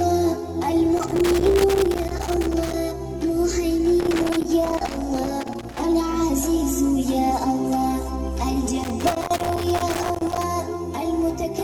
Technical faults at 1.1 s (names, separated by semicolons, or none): loose connector crackle